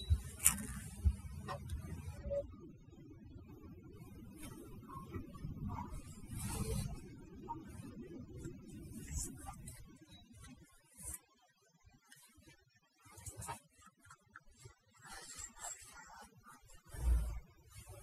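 From the start of the speech to its end, overdone noise removal shapes everything heard. The noise reducer was pushed too hard, so any frequency band sitting near its noise estimate is pulled down or shut off, taking the quieter parts of the voice along with the noise. Between phrases the background drops to near silence dotted with twinkling specks. Unlike a noise gate, which opens and closes the whole signal, this thins the sound band by band even while the voice continues.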